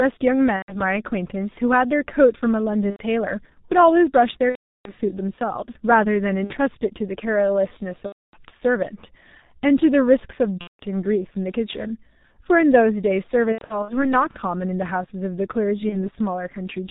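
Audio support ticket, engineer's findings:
Muffled, hoarse speech throughout, nothing above 4 kHz, consonants smeared. Component: G.723.1 codec, consistent with the 6.3 kbit/s mode, heavy damage. Mechanism: 30 ms frames, a slowly updated voice model, and a band-limited low-rate encoding.

Buzzy, stretched tone or fading coloured noise at 0.56–0.82, 2.90–3.03, 4.50–4.93 (longest gap, 360 ms), 6.44–6.54, 8.06–8.36, 10.61–10.81, 13.52–14.15 (scattered, runs up to 90 ms) and 15.89–16.10 s. Component: VoIP packet loss concealed by the speech codec. Mechanism: the decoder extrapolates the last pitch and filter while gain decays. Speech stays weak briefly after each gap.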